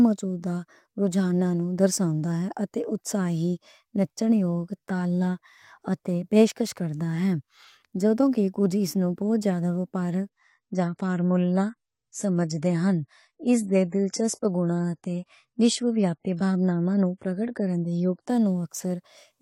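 From 10.29 s to 18.29 s the adaptive stream falls back to a lower bitrate, which fits a switch from roughly 96 to 32 kbit/s AAC. The speech abruptly loses everything above 11.5 kHz, sounding duller and more artefact-laden, with no gap at either change.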